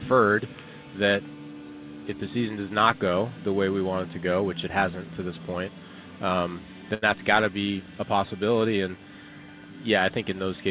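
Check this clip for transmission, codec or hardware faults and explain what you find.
One transmission fault is audible: a burst of packet loss from 6.94 to 7.04 s. Roughly 80 ms of consecutive audio never arrived in time to be played. The receiver's concealment filled that span by extending the last received sound and fading it down, which produces a brief held, decaying tail in place of the real signal. Playback then resumes about 80 ms further on, so that stretch of the original is skipped. The band-limiting to 4 kHz is consistent with G.711 mu-law on a call path.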